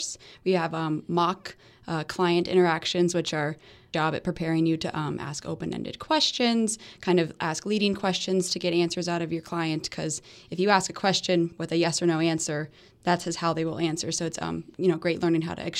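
It's a speech clip with one stream segment skipped at 3.93 s: right after "client interactions which are" the audio jumps straight to "at preparing you to", with a small blip at the join. That's likely a stream segment that failed to load, with the player moving on to the next one.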